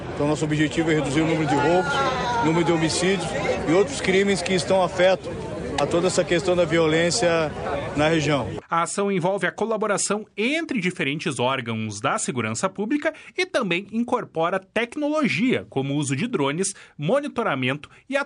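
Nothing in the recording jumps out as a technical fault at any point.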